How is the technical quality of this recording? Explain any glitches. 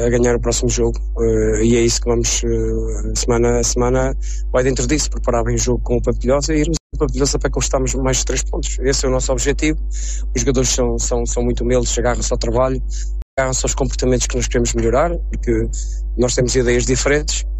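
Two glitches mark the recording, both the same kind: a stream reconnect at 6.77 to 6.95 s and again at 13.22 to 13.39 s. Each time the connection dropped, the player went quiet for about 160 ms and 150 ms respectively, then reconnected and spun up a fresh decoder. The audio picks up ahead of where it left off, roughly a tenth of a second later the first time and around 150 ms the second, so you hear a short gap followed by a small jump forward.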